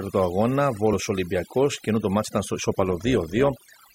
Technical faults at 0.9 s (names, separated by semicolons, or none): overdone noise removal; compressed frames skipped